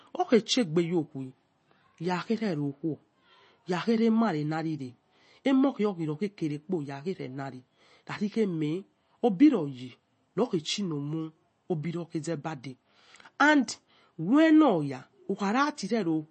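From start to finish the speech sounds watery and swirly, with plainly audible damage and nothing above 8.3 kHz. That hard treble ceiling and the flickering detail point to likely MP3 compression at a low bitrate, around 32 kbps, with weak frequency lines dropping out frame by frame.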